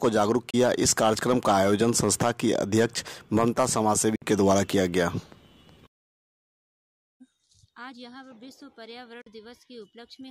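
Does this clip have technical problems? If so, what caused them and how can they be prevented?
Yes. Short silent gaps occur at 0.50–0.54 s, 4.15–4.22 s and 9.21–9.27 s, likely from a Bluetooth dropout. Audio packets arrived too late and were discarded. The sound then resumes as though it had kept playing. Keeping the headphones close to the source, with a clear path and away from Wi-Fi congestion, prevents this.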